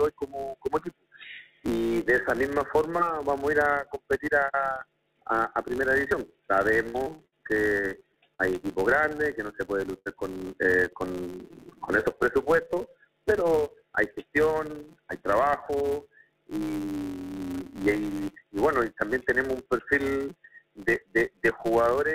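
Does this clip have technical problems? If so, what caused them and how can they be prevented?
Yes. A filter restarted on every block runs through the whole clip. Its state is cleared at each block boundary, so every block opens with a small click. These clicks form a steady buzz near 172 Hz that rises and falls with the level. The rate fits a 256-sample block. Keeping the filter state from one block to the next prevents this.

From 6.84 to 8.42 s there is repeated packet loss with a robotic sound. Ten gaps arrive close together, the longest 60 ms. About 280 ms is missing, and concealment fills about a quarter of the stretch, so the sound turns choppy. A steadier network path and forward error correction would prevent it.

A burst of packet loss hits from 9.99 to 10.09 s. About 80 ms is lost in one run. The receiver stretches the last sound and fades it, then jumps ahead, so that part never returns. 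Redundant packets or a better link would prevent this.

A jitter buffer speed-up runs from 12.07 to 12.77 s. The buffer had built up extra delay. The receiver cut out short pitch-period pieces, about 70 ms in total, so the audio plays at 108% speed with the pitch unchanged and sounds hurried. Reducing bursty packet delivery upstream prevents this.

The call path uses G.711 mu-law, and nothing above 4 kHz comes through.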